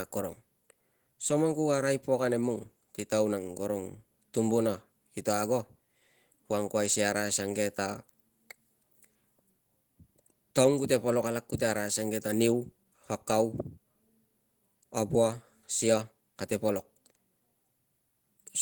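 From start to finish the speech carries Opus voice compression, and at what sounds like roughly 16 kbps the damage is easy to hear. The low band is coded by prediction with coarse excitation, so the speech comes out hoarse and a little robotic, while a layer covers the top up to 20.2 kHz.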